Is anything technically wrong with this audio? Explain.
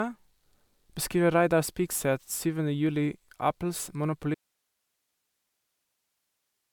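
Yes. An audio dropout to a faint residue starts at 4.35 s and lasts to the end: the speech cuts abruptly to faint hiss far below normal level, likely a signal loss with the path still live.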